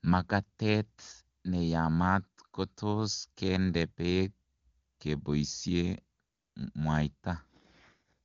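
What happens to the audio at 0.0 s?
Nothing goes wrong at 0.0 s: the speech starts intact, carried through the AMR wideband (HD Voice) codec at a high enough rate that its coding leaves little or no audible trace.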